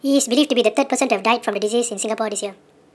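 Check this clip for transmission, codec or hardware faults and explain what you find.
There's one fault, running the whole way through: a wrong sample rate. The speech plays back 1.5 times too fast and about 7 semitones sharp, so it sounds high and rushed. Speed and pitch shifting together by that ratio fits 16 kHz audio being played at 24 kHz with no conversion.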